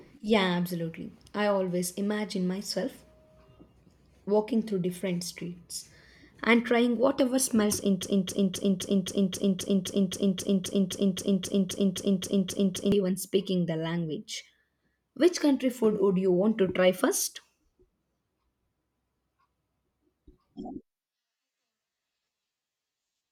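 A speech clip with a broken-record loop from 8.03 to 12.92 s: after "and trying whatever smells", a 263 ms fragment repeats 19 times before "even speaking the language" resumes, likely from a stalled player or stream. On a spectrogram and waveform, identical blocks tile evenly, with the lost audio simply missing.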